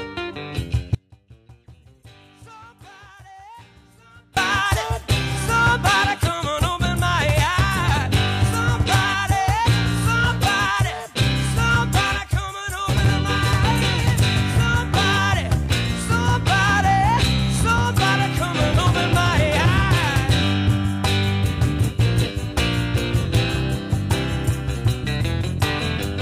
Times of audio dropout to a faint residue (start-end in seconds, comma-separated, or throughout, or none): 0.95-4.37